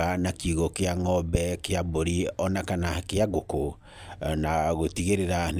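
Nothing in this speech suggests a technical fault.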